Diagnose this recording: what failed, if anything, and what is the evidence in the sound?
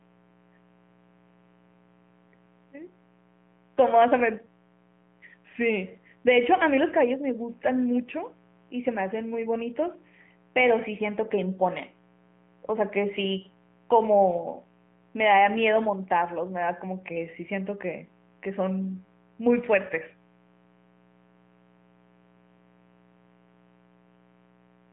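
Mains buzz runs through the whole recording, a steady raspy drone about 30 dB below the speech. This is an analogue wiring fault: sharp switching spikes from a dimmer, rectifier or poor shielding enter twice per 60 Hz cycle, spreading harmonics of 60 Hz up to several kilohertz.

The AMR narrowband mobile codec damage also runs throughout. This is a codec-stage fault: the speech is confined to a 150 Hz to 3.4 kHz telephone band with nothing above 3.5 kHz, and it has a plainly buzzy, synthetic quality that fits the pulse-driven vocal-tract model running at roughly 10 kbps.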